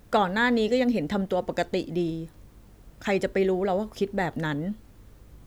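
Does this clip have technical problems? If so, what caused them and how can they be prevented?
No, nothing in this speech recording points to a technical problem, so there is no cause to trace and nothing to prevent.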